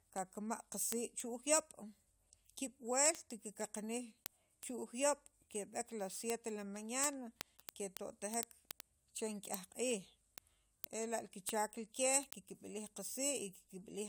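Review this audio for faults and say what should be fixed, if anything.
Word clock ticks run from 0.18 s to the end of the speech, a steady train of sharp clicks of uneven strength about ten times a second, roughly 150 in all. The receiving device is reading a digital link on its own clock rather than locking to the sender's, and the two differ by something like 200 parts per million. Each time they drift a sample apart, a single sample is dropped or repeated, leaving a tick. To prevent it, clock the receiver from the incoming digital signal or from a shared word clock.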